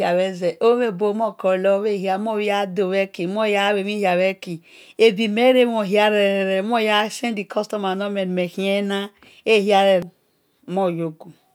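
Nothing goes wrong anywhere in this bit of speech, so there's no technical fault to point out at any moment.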